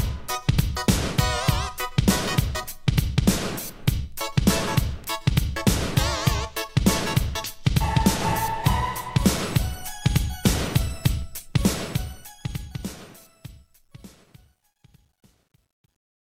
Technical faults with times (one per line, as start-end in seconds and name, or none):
11.50-16.27 truncation distortion on a fade